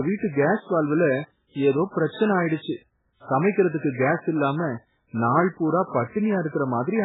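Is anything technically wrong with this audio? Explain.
Yes. The speech carries heavy MP3 compression damage throughout. Nothing remains above 3.8 kHz. Weak frequency lines drop in and out, sounding watery and swirly. The likely cause is a bitrate of about 8 kbps.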